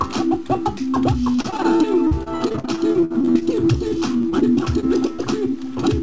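From 1.32 to 3.43 s the sound turns choppy, the robotic sound of repeated packet loss. A couple of dozen short holes, the longest about 55 ms, are patched by stretching the preceding sound, so roughly a quarter of this stretch is concealment.

Overlapping this, from 2.74 to 3.98 s, the audio drags at 93% speed with unchanged pitch and drawn-out sounds. This is a jitter buffer slow-down: the receiver repeated small pitch periods to rebuild its reserve, adding about 93 ms.

From 3.78 to 5.20 s the robotic sound from repeated packet loss returns, milder this time, with about nine brief gaps, none longer than 28 ms, filled by continuing the last sound. Across the clip nothing is heard above 8 kHz, which fits a wideband call codec.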